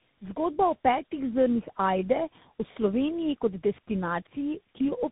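Tandem speech coding runs throughout: the speech sounds rougher, more muffled and more warbly than any single narrowband codec would leave it, with nothing above 3.8 kHz.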